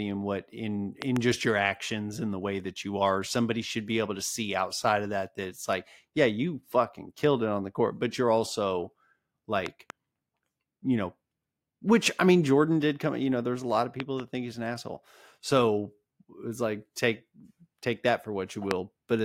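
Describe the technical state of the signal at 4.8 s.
At 4.8 s the signal is intact, with no fault audible at that moment.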